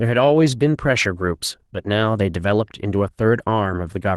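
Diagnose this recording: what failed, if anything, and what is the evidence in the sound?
Nothing in the recording points to a failure at any stage. The speech shows the normal character of a WebRTC call path, with its high end stopping around 12 kHz, which fits an Opus call codec at a moderate bitrate of about 32 kbps.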